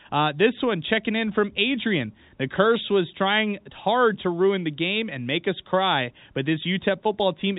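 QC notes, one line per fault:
No faults found.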